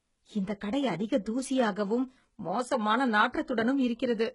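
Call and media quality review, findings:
Likely HE-AAC compression at a very low bitrate, roughly 12 kbps by the sound, throughout the speech. Treble rebuilt by band replication from lower bands, not the original. Sibilants gritty and metallic, harmonics misaligned above crossover; nothing above 11 kHz.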